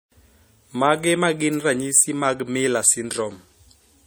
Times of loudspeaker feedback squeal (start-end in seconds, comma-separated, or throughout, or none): none